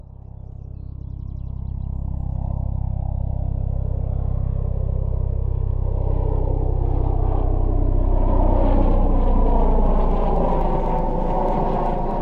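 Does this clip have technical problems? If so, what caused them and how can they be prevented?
Yes. Periodic USB or driver dropouts: from 9.86 to 12.11 s, something blocked the audio path every 0.125 s, skipping a fraction of a millisecond each time and leaving about twenty regular ticks. To prevent this, stop background tasks that poll the USB bus and give the audio driver a larger buffer.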